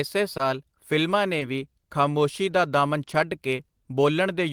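At 0.37 to 0.41 s and again at 1.39 to 1.43 s, short concealed packet loss briefly smears the speech: about 20 ms never arrived, and the decoder bridged it by extending the preceding sound, so there is a soft wobble rather than the abrupt silence of an unconcealed dropout.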